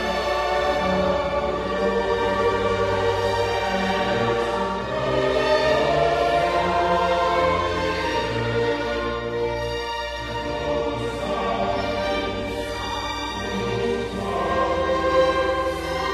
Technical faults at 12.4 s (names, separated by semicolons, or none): mains hum